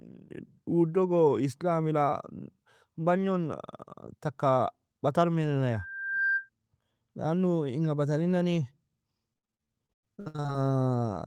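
This speech clip carries a loudspeaker feedback squeal from 5.71 to 6.49 s: a steady 1.6 kHz tone swells over roughly half a second to about the level of the speech itself, as the microphone picks up its own loudspeaker and loop gain at that frequency exceeds unity. From 9.33 to 10.56 s there is repeated packet loss, giving a choppy, robotic texture. Holes arrive in quick succession, the longest about 99 ms, and nearly half the stretch is patched by extending the preceding sound.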